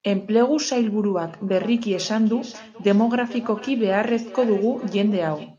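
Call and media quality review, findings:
Feedback echo between two devices, 1.27 s to end. Speech repeats about every 0.4 s, about 19 dB down. Second device's mic recaptures the playback; local canceller misses it.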